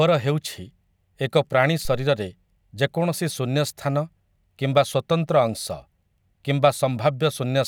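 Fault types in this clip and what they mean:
Phantom power thump: a supply switched on or off on a live microphone input sends a voltage step through the coupling capacitors, heard here after "ଏକ ପ୍ରାଣୀ" at 1.85 s as a deep thud peaking near about -21 dBFS and dying away within 60 ms, unlike a handling bump, which rustles.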